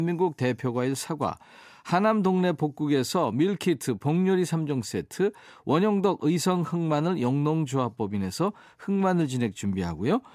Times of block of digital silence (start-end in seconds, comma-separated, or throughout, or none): none